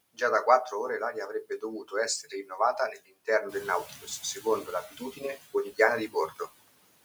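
Noise suppressor artifacts run through the whole speech clip. The suppressor pulls the background down by about 20 dB in each band it judges to be steady noise, working frame by frame. Between phrases the noise sinks away, and under the speech it swells back. On a spectrogram, the noise floor looks patchy and mottled, with isolated flickering time-frequency cells instead of an even wash.

Speech cut by the noise suppressor first occurs from 2.23 to 2.59 s, with a drop of about 10 dB. It recurs at 2.93 to 3.28 s (about 16 dB), 3.89 to 4.08 s (about 15 dB), 4.91 to 5.54 s (about 13 dB) and 6.08 to 6.48 s (about 16 dB). Each time, the suppressor mistakes low-level speech for noise and attenuates it for roughly a tenth to a fifth of a second, so consonants or word endings sound swallowed. The waveform shows abrupt dips in the envelope. The spectrogram shows speech energy fading into the background.

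Noise suppressor catching up spans 3.49 to 4.82 s. The room noise steps up by about 10 dB near 3.5 s and settles about 18 dB below the speech. The suppressor's noise estimate lags, so the louder noise first comes through with only about 9 dB of reduction. It then sinks over 1.33 s as the estimate adapts, which appears as a bright band of noise that gradually darkens.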